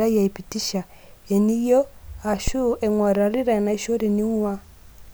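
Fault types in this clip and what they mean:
Phantom power thump: a deep thump at 2.48 s, peaking at about -10 dBFS and dying away within 18 ms, from a supply switched on or off on a live input.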